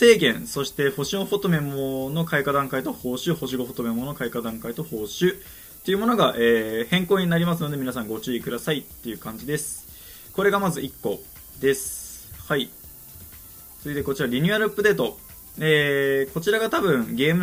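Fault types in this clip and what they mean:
Low bit depth with noise shaping: the whole clip is rounded to very few levels, which fits 8-bit samples, and that rounding error is fed back so it lands mostly at high frequencies. It is heard throughout as a steady, thin hiss, roughly 15 dB below the sound, rising sharply toward the top of the band. Plain low bit depth gives flatter, grittier distortion, and ordinary background noise is spread more evenly, but here the hiss is strongly bright-weighted.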